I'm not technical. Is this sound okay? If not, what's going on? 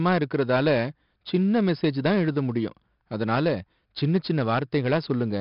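No. The speech has 4-bit ADPCM compression from start to finish. This old squeezing method saves each moment of sound as a tiny step from a guess. With so few steps, the guess keeps missing. That leaves a gritty hiss riding on every loud sound, and it is heavy here. Sharp starts of sounds get rough. Also, nothing comes through above about 5.3 kHz, which points to a low sample rate. So the speech sounds dull and muffled.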